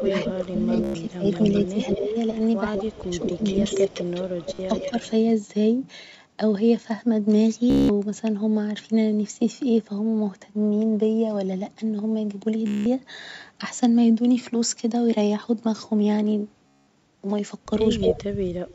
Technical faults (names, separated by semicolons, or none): echo leak; speech suppressed in double talk; Bluetooth stutter